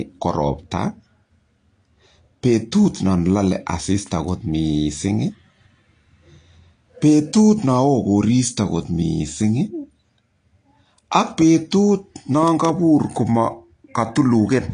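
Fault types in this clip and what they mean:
AAC compression: The speech sounds dull and smeared throughout, with plainly audible coding damage and nothing above 9.8 kHz, so the top of the sibilants and breath is gone. This is likely from AAC-LC encoding at a low rate, consistent with about 32 kbps. At that rate the encoder splits the signal into frequency lines and quantises them coarsely against a hearing model, discarding the upper band and blurring the detail it keeps.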